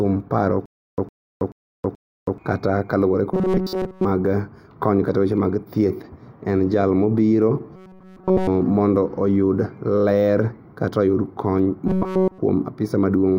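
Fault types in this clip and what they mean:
Stutter with silent gaps: From 0.66 to 2.38 s, the same 109 ms burst of speech plays four times, each followed by about 323 ms of dead digital silence, so the fragment returns every 431 ms at an even pace. This points to a stalled player or stream that likely replayed its last fragment on each retry and then ran dry. The speech that should have filled those 1.7 seconds is missing.
Robotic sound from repeated short buffers: At 3.34–4.05 s, 7.76–8.48 s and 11.87–12.39 s, the speech becomes a rigid metallic buzz locked at 188 Hz. It still follows the rough shape of the speech. This is the signature of a single short block of about 5.3 ms being looped in place of fresh audio, likely because new data arrived too seldom. Within those spans essentially all of the output is repetition, and the real audio is skipped.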